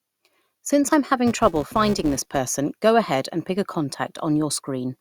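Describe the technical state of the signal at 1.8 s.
At 1.8 s you're inside a filter restarted on every block, 1.27 to 2.39 s: each block starts from zero state, giving a level-tracking 345 Hz buzz that fits 128-sample blocks.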